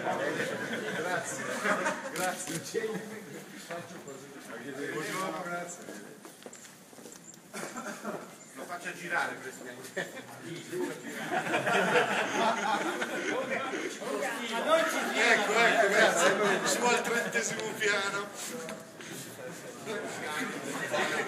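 Nothing in the audio stood out as a technical problem on listening.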